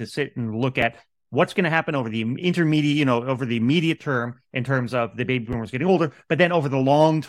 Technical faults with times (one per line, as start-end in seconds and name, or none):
0.81 repeated buffer
5.53 repeated buffer